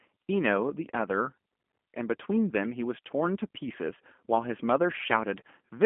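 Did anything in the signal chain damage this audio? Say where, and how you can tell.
Yes, at the codec stage: the speech passed through the G.729 codec for the whole clip. Energy stops near 3.4 kHz and thins below 200 Hz. The rough, synthetic texture fits an 8 kbit/s coder rebuilding each 10 ms frame from a filter, pitch predictor and sparse pulses.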